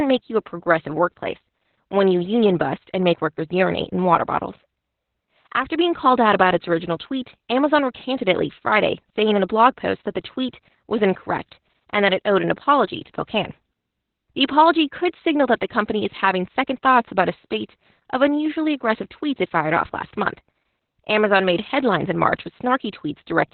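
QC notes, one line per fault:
Throughout: Opus voice compression. The band stops near 4 kHz, so the speech is muffled and dull. Coarse linear-prediction coding of the excitation makes it hoarse and slightly robotic. The heavy damage and narrowband SILK coding fit a very low rate, around 8 kbps.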